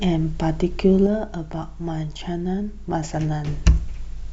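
From 1.07 to 3.47 s the speech falls abruptly by about 6 dB, a clear waveform step, likely one channel dropping out before mono summing.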